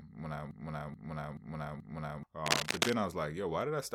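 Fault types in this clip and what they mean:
broken-record loop: Right after "when I", from 0.51 to 2.23 s, a 430 ms fragment repeats exactly four times back to back, likely from a stalled player or stream resending its last buffer. The spectrogram shows identical blocks side by side, and the speech meant for that span is lost.
cable scratch noise: From 2.46 to 2.93 s, dense, uneven scratching rustles over the speech at about 5 dB above it, likely from a worn cable or connector being moved. The waveform shows jagged, spiky bursts, and the spectrogram shows scattered broadband vertical specks.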